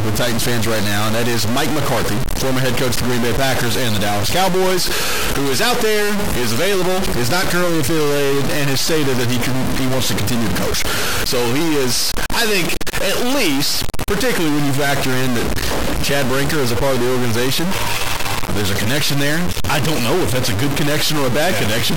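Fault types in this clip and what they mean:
Stuck bit: the whole clip carries a harsh, buzzy grit, and even the quiet stretches hiss instead of falling silent. That pattern most likely comes from one bit of the samples being held at a fixed value by a faulty data line or converter. About half the samples then land off by that bit's weight, roughly a step near -15 dBFS, so the distortion follows the waveform and fills the pauses with fairly loud noise.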